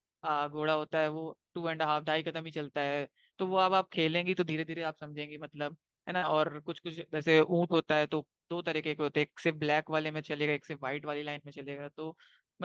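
Brief rough, noisier stretches at 0.53 to 0.63 s, 4.79 to 4.85 s, 6.22 to 6.32 s and 9.70 to 9.72 s are a lost packet rebuilt from error correction. The missing audio, about 60, 40, 60 and 20 ms, points to three, two, three and one lost packets. The decoder played the lower-bitrate Opus copies carried in the following packets, so there is no gap. Just before the third of these, from 6.17 to 6.24 s, a short smear or wobble is short concealed packet loss. About 40 ms never arrived in time, and the receiver extended the preceding sound for roughly 43 ms before blending back. All of this sits on an Opus call path at 40 kbps with audio up to 12 kHz.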